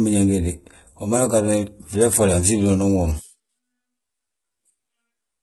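Throughout, the speech has heavy codec damage and nothing above 11.8 kHz, with treble rebuilt from lower bands that sounds gritty and metallic, likely HE-AAC compression at a very low bitrate.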